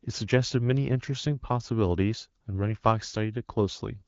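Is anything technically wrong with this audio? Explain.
No, nothing is wrong: the speech carries the band-limited character of AMR wideband (HD Voice) coding, which fits a rate around 15.85 kbit/s where the codec stays clear, and no fault is audible.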